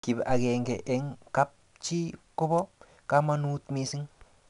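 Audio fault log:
Throughout: 4-bit ADPCM compression. Each sample gets coded as a small step from a predicted value, and the step size adapts as it goes, so the error rides along with the speech level. You get a gritty hiss on every loud syllable, and sharp onsets sound crunchy where the step can't grow fast enough. Nothing above 10.6 kHz, so the top end is dulled too, which fits roughly an 89 kbps stream.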